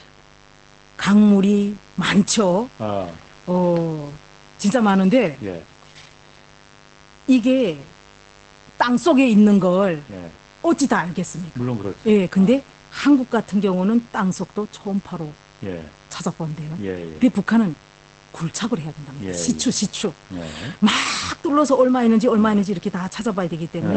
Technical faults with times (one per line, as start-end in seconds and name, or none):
0.00-23.97 mains buzz
0.00-23.97 Opus voice compression